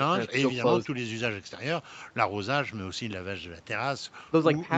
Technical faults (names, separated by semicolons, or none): none